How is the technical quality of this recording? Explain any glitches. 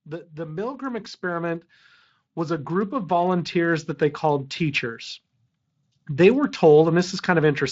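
The recording has two level swells caused by automatic gain rising. From 0.34 to 1.7 s the level climbs about 6 dB, and from 2.34 to 5.1 s about 8 dB, as the gain control, finding the input too quiet, gradually turned itself up. The background noise rises along with the speech, which distinguishes this from a speaker simply getting louder or moving closer. The change is smooth rather than a sudden jump. Underneath, the Speex speech codec adds only a light coding texture.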